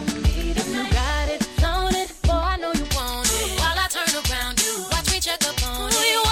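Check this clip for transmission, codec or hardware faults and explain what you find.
One fault: pre-emphasis left on, from 2.85 s to the end of the clip. At that point the treble was boosted for recording or transmission and the complementary de-emphasis was never applied, so the lift reaches the output. The tilt fits a J.17 characteristic, with the band around 10 kHz sitting about 11 dB above 1 kHz. The sound turns abruptly thin and bright, with exaggerated sibilance, and the low and mid range seem to recede.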